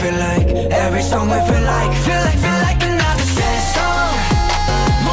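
No technical faults are audible.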